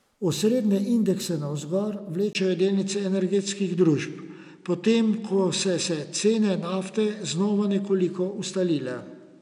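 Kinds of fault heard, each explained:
Input switched to a poorer device: At 2.33 s there's a brief gap of about 20 ms, and from then to the end the speech loses its top end, with nothing above roughly 10.5 kHz, plus a faint new background noise sitting around 50 dB under the speech. Loudness barely shifts. That pattern is most likely the recording flipping over to a different, narrower-band microphone partway through, which brings its own duller tone and background noise.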